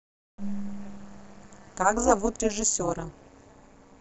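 From start to finish the speech carries overlap-add ripple. Whatever split it into windowed frames and stitched them back used an overlap that doesn't add up to a steady gain, so the level dips and recovers once per frame. The swing is deep, about 60 dB, and it repeats at around 200 Hz, fast enough that it comes across as a harsh, metallic buzz with extra tones around each note riding on everything.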